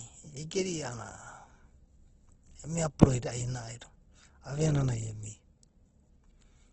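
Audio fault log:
Throughout: Opus compression, heavy. The speech sounds rough and grainy rather than swirly, with tones turned noisy and few audible spectral gaps. The encoder is keeping each band's energy but filling starved bands with folded or noise-like content. Nothing is present above about 8.2 kHz, a wideband limit. The graininess points to Opus in its music (CELT) mode, with damage this severe fitting a bitrate around 12 kbps. Low-rate Opus encoding is the likely cause.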